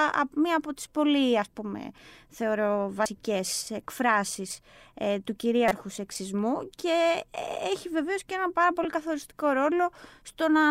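A speech recording interrupted by short glitches at 3.06 s, from 5.68 to 5.72 s, and at 8.84 s. These come from damaged data in a compressed stream: the decoder misreads corrupted frames, loses sync and briefly outputs garbage while it finds the next valid frame.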